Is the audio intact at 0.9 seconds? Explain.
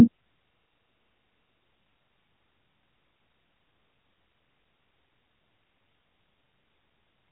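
No. At 0.9 seconds the speech is caught in a system hang loop that runs from 0.48 to 1.6 s. The machine stalled while the sound hardware kept replaying the same 40 ms stretch of its buffer, 28 times at 25 Hz, giving a rough, buzzing stutter in place of about a second of speech. A waveform shows one identical 40 ms shape repeated edge to edge. A spectrogram shows frozen vertical stripes, capped near 3.9 kHz by the narrowband mobile codec.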